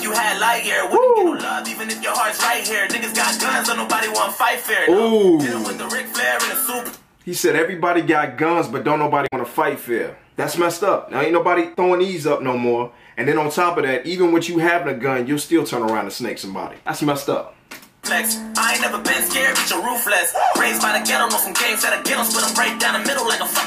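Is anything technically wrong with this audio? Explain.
Yes. From 9.24 to 9.33 s there is damaged data in a compressed stream. For roughly a tenth of a second, part of the encoded data is corrupted. The decoder cannot make sense of those frames and loses its place until it finds the next valid frame header, so a brief chirp, squawk, click or short hole cuts into the audio.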